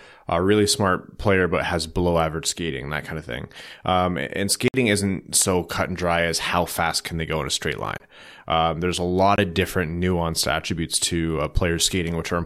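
At 4.68 to 4.74 s, right before "isn't so cut and", the speech drops into a block of digital silence: about 60 ms where the audio simply cuts out, with hard edges going in and out, so it's a short hole. Two shorter 20 ms blocks follow, at 7.98 to 8.00 s just after "go in a straight" and at 9.36 to 9.38 s between "there's a lot" and "of different nuanced attributes".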